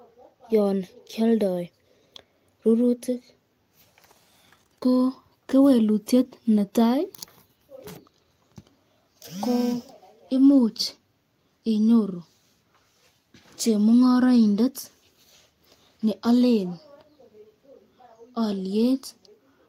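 Around 10.45 to 10.55 s the speech turns briefly rough and noisy: a lost packet rebuilt from error correction. The decoder played the low-bitrate copy carried in the next packet, so there's no gap. The stretch fits about three lost packets, roughly 60 ms rebuilt.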